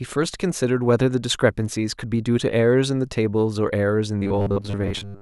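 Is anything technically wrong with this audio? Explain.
Yes. From 4.18 s to the end at 5.21 s the speech turns robotic, a stiff metallic buzz at 100 Hz. That likely comes from repeated short buffers: audio arriving too slowly, so roughly 10 ms chunks get replayed for most of the stretch while real audio is skipped.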